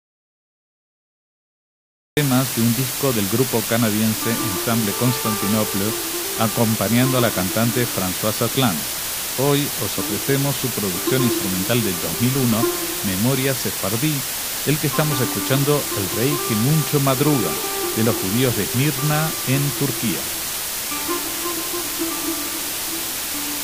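From the start until 2.17 s the audio is already in an audio dropout to silence: pure silence with no room tone, likely a lost input, unlike a fade or noise gate. Throughout, low bit depth with dither at 4 bits leaves a steady, even hiss nearly as loud as the sound itself, with no gritty distortion, unlike undithered quantisation.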